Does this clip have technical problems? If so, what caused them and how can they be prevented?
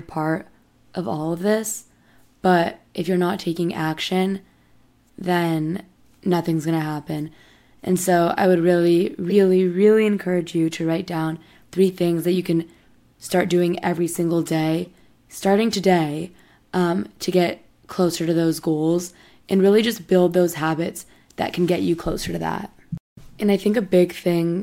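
Yes. Corrupt frames were decoded in this speech at 9.30 to 9.32 s, 12.34 s and 14.85 to 14.87 s. Each is a frame-length squeak or noise burst: flipped bits gave wrong gains or codes, misplacing energy. The first is loudest, near -10 dBFS; the others sit near -25 and -30 dBFS. Checksums with concealment of failed frames, instead of decoding them, would prevent this.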